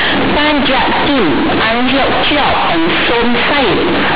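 A-law companded bytes are being played back as plain linear 8-bit samples without expansion, so this speech clip comes out with every sign change jumping across half the output range. Quiet parts match loud ones, giving harsh, very loud buzzy distortion throughout and heavy noise in the pauses, while the underlying G.711 telephone coding itself, at 8 kHz, works as intended.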